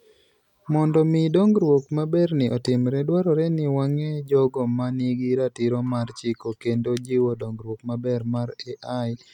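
From 4.72 s to the end, channel delay (comb filtering): one channel lags by roughly one sample, so the mono sum cancels near 20 kHz, dulling the top; spectrograms show high-frequency energy fading.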